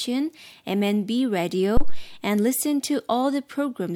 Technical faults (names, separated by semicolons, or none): phantom power thump